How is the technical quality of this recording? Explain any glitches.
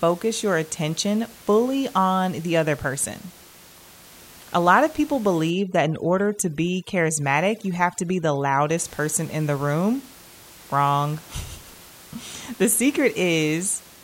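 One glitch stands out in this speech recording, against steady room noise sitting about 24 dB below the voice. From 5.51 to 8.77 s there is overdone noise removal. The reducer cuts frequency bands near its noise estimate almost to nothing. Quiet parts of the voice vanish with them. The background drops and breaks up into twinkling specks.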